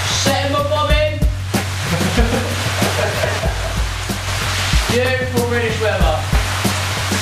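At 3.39 s the digital gain likely changed from one sample to the next without a ramp, as happens when a level setting or bit shift is applied instantly. The result is a sudden gain jump: the sound and its background noise drop together by about 5 dB in a single step, hold at that lower level, then snap back up at 4.27 s, each transition abrupt rather than a smooth fade.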